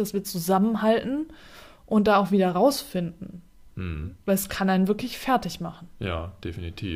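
Nothing in this bit of speech stands out as a technical fault; it just runs along from beginning to end without anything going wrong.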